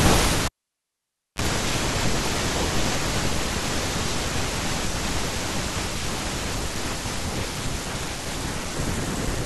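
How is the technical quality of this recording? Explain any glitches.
The recording has one clear glitch, a cable pulled and plugged in. At 0.46 s a pop drops the speech to near silence for 0.91 s. A 31 ms, 50 Hz mains buzz sounds as the plug tip touches, then a second pop at 1.42 s. The waveform shows spikes around a flat gap, and the spectrogram shows a brief 50 Hz band.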